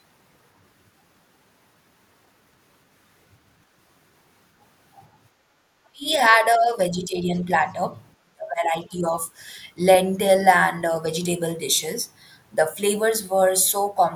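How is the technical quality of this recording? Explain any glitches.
The recording has echo-canceller problems: one background dropout and three stretches where the speech itself is pushed down.

From 5.31 to 5.63 s, the background is gated by the echo canceller. With the loudspeaker active, the canceller clamps the microphone, so the room tone dips by about 14 dB and then recovers. On a waveform the noise floor visibly narrows, and a spectrogram shows a brief darker band across all frequencies.

The speech drops sharply around 5.91 to 6.07 s, by roughly 25 dB. It sinks more gently, by around 10 dB, from 6.42 to 7.39 s. From 8.21 to 9.13 s it falls deepest, by roughly 30 dB. The likely cause is speech suppression in double talk, where the canceller mistakes the talker for echo while both sides speak. Waveform envelopes shrink in ragged chunks, and spectrogram harmonics fade or break, especially at the top.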